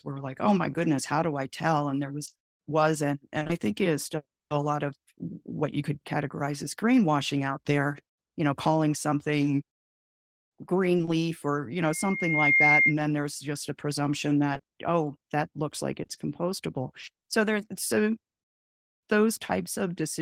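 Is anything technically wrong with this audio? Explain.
Yes, two kinds of fault are audible in this speech.

Repeated packet loss (robotic sound) occurs from 2.25 to 3.51 s, 10.97 to 11.09 s, 14.53 to 14.65 s and 16.03 to 17.09 s. Short chunks, none longer than 20 ms, go missing in quick succession, and each hole is patched by stretching the last sound. That gives a choppy stutter with pieces missing rather than the clean silent gaps of plain dropouts.

A loudspeaker feedback squeal runs from 11.77 to 12.95 s. The microphone re-captures its own loudspeaker, and at 2.1 kHz the loop gain tops one, so that tone feeds on itself. It swells over roughly 0.7 s to about 5 dB above the speech. Its growth from nothing at one fixed pitch separates it from a steady whistle or hum.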